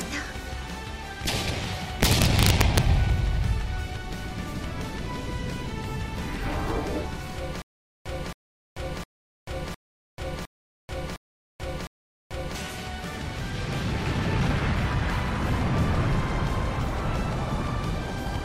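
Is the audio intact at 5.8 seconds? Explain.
Yes, at 5.8 seconds the audio is intact, with no dropout, click, distortion or other fault audible at that moment.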